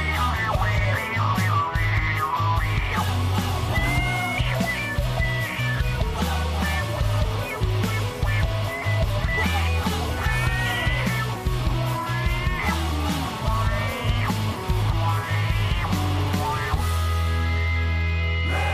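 Nothing stands out here; no technical faults turn up anywhere in the clip.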